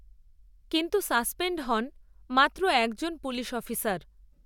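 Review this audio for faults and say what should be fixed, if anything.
No faults found; nothing needs fixing.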